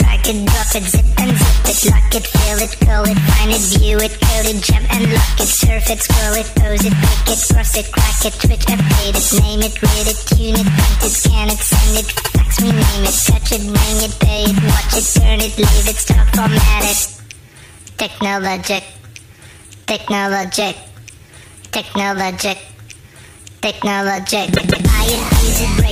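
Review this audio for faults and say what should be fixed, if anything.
Repeated frames: a run of compressed frames was delivered to the decoder more than once, so the same slice of sound plays again. At 12.16 to 12.32 s a 78 ms block, which fits about three frames, is heard two extra times. At 24.54 to 24.86 s a 157 ms block, fitting about six frames, repeats twice more. Each is a stutter, and together they lengthen the audio by about 0.47 s. To prevent this, track frame sequence numbers and discard duplicates before decoding.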